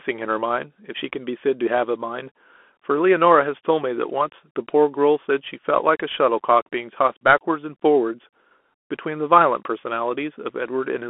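All the way through, the speech has the Bluetooth CVSD headset codec sound: squeezed into roughly 250 Hz to 3.4 kHz, with scratchy s sounds and a grainy hiss underneath.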